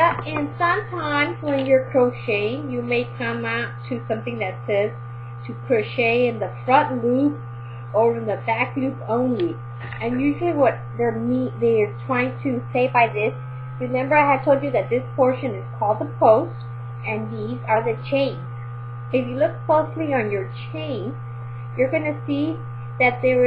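At 12.74 s the audio abruptly speeds up by 6.22% and rises 105 cents, just over a semitone, until snapping back at 14.91 s; the same jump recurs from 17.77 to 18.46 s. These are likely drift correction steps, where clock-matching software briefly changed playback rate to rebalance its buffer. On a spectrogram every harmonic line steps up about 6% at once and drops back at the end, while the waveform's periods visibly shorten.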